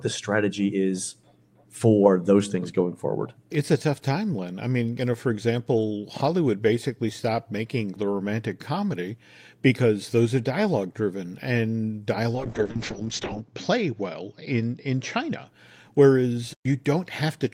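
After "are dialogue driven and", from 12.36 to 15.53 s, a call bitrate drop turns the speech rough and muffled, consistent with coding falling from about 32 to 6 kbps. The spectrogram loses everything above 8 kHz, worst for about 1.05 s.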